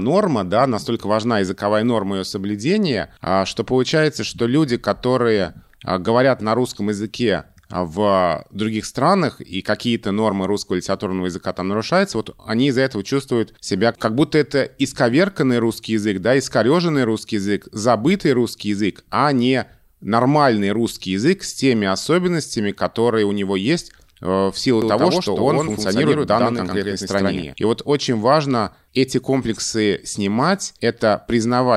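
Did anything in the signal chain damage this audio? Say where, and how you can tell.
Yes: a doubled audio track from 24.82 to 27.54 s, right after "есть э в силу". A dry, full-band copy about 5 dB quieter trails by roughly a tenth of a second, starting and stopping abruptly. This is likely a second, slower capture path or a misaligned edit.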